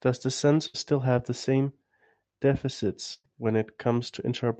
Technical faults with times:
0.67-0.76 burst of packet loss
3.14-3.26 burst of packet loss

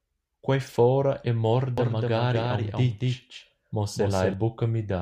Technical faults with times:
1.78-4.34 doubled audio track

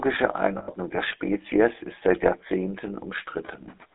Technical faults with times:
0.00-3.94 GSM full-rate codec
0.58-0.70 lost GSM frames

